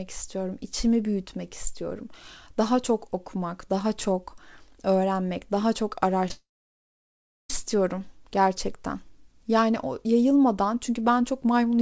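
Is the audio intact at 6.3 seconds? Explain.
No. Short concealed packet loss hits right after "çok öğrenmek daha çok", at 6.27 s and again from 6.28 to 6.31 s. Each lost 10 ms that the receiver patched by stretching the preceding sound, leaving a brief smear or wobble.

From 6.32 to 7.50 s there is a long network dropout. The last sound carries on briefly, fades, then about one second of silence follows before the audio resumes further on, missing what fell in between. The likely cause is that no packets arrived for that stretch.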